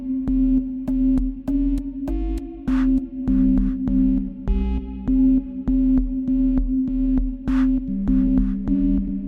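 No technical faults can be heard anywhere in this recording.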